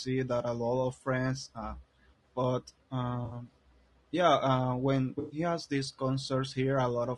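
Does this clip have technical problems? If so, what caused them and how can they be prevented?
Yes. Throughout, the speech sounds rough and grainy, with noise filling the gaps between harmonics and a thin, synthetic top end. This is likely low-delay AAC compression (AAC-ELD), whose short frames resolve pitch poorly, here at a bitrate that sounds close to 32 kbps. Raising the bitrate or using a longer-frame codec where latency allows would prevent it.

From 3.25 to 3.35 s and again from 5.19 to 5.39 s, the sound turns into a smeared, noisy, phasey patch. This is AAC frame loss with concealment: about 60 ms and then 120 ms of frames went missing, and the decoder filled the gaps from the last good spectrum. A steadier network path, jitter buffering or forward error correction would prevent it.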